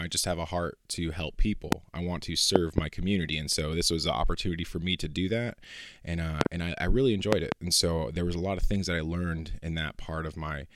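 Speech, with four loud pop events standing well above the voice, roughly 25 dB. One pop at 1.72–1.75 s, after "a heart to help". Double pops at 2.56–2.80 s, 6.41–6.48 s and 7.33–7.54 s. Speech continues underneath. Likely voltage spikes from a plug, switch or static.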